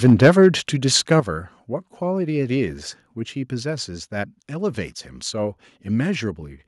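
Speech opens with harsh, crackly microphone overload from 0.04 to 0.48 s, peaks about 4 dB past full scale, likely an input gain set too hot. The microphone volume then steps down, about 3 dB at 0.1 s and about 8 dB at 1.2 s, dropping voice and background together, likely the call software pulling the input gain back after clipping.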